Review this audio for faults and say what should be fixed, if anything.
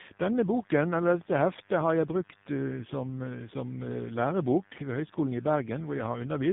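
Rough, muffled and warbly speech runs through the whole clip, with nothing above 3.8 kHz. This is tandem speech coding: the speech went through two lossy speech codecs in a row, each decoding and re-encoding the damaged output of the one before, so their artefacts stack. The sound fits a GSM full-rate leg at 13 kbit/s, a G.711 A-law hop that only carries the signal, and a final AMR-NB leg at 7.4 kbit/s. To prevent it, pass the coded speech across network borders without transcoding, for example with transcoder-free operation, or keep one codec end to end.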